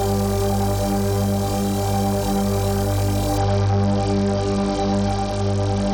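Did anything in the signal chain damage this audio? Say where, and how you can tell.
Yes. At 3.38 s a Bluetooth SBC bit pool drop sets in at the codec stage over the wireless link and lasts to the end of the clip. The treble suddenly dulls and a gritty, granular noise rises, which fits the bit pool falling from 28 to 8, near 72 kbps. A simple low-pass filter would cut the highs cleanly; here the top sub-bands are starved and the rest coarsely quantised, so dullness and grit arrive together.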